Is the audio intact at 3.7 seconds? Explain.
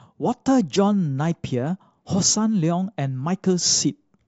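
Yes, the speech at 3.7 seconds is intact, with no audible fault at that moment.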